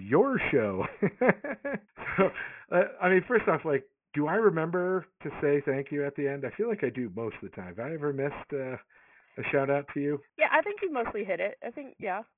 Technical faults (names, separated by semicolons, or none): aliasing